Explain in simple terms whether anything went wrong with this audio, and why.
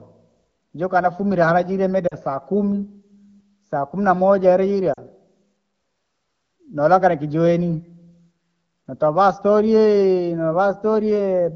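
Yes. Twice the speech briefly stumbles: at 2.08 to 2.15 seconds and again at 4.93 to 4.98 seconds, the sound drops away toward near silence before picking up again. These are lost AMR speech frames. Radio errors corrupted small slices of the call, so the phone's decoder filled each gap by repeating the last clean sound while turning it down. Each gap is brief, which fits about two missing frames.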